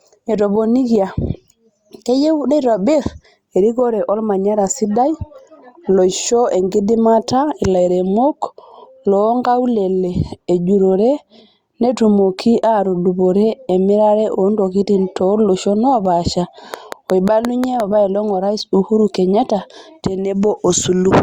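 From 16.74 s to 17.81 s a train of clicks cuts into the speech: around seven sharp ticks at a steady 5.65 per second, each standing roughly 10 dB above the surrounding level. The likely cause is interference from nearby equipment or a faulty connection or power supply injecting repeated pulses. Crackle is random and uneven, and a lone click is a single event, but these pulses share one shape and an even rhythm, forming a short mechanical ticking laid over the sound.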